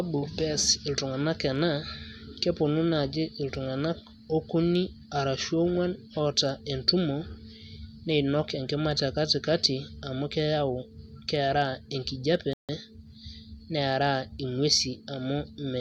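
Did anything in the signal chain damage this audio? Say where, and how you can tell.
Yes, at playback. Around 12.53 s the speech drops to silence and picks back up at 12.69 s, right where it left off, with nothing skipped. That's a rebuffering stall: the player drained its downloaded audio and sat waiting for the next chunk before carrying on. Since the stream resumes seamlessly rather than jumping ahead, no content is missing. The stall just inserts roughly 155 ms of dead air into the timeline.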